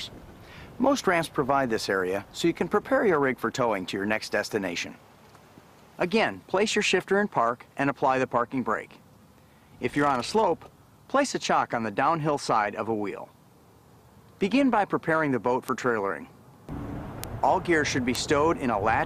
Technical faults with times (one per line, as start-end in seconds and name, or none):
15.68 bit error spike
17.24 bit error spike
18.15 bit error spike